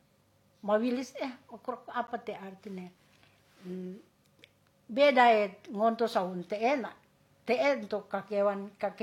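At 2.07 s the speech is interrupted by a gap between stream segments, directly before "te arti nem". The timestamps of two adjacent segments do not quite meet, so the player pads the difference with silence, here about 11 ms, at a boundary consistent with 2-second segments. It sounds like a brief, hard-edged dropout, a tiny click-bounded hole in the sound. No audio content is missing; the material that follows simply arrives about 11 ms late.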